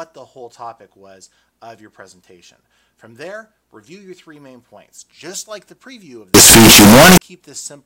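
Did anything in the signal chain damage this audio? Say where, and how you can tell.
Yes: from 6.34 to 7.18 s the audio becomes uniformly loud, harsh distortion, likely signed and unsigned mixed up in sample-format conversion, flipping the top bit of 16-bit samples.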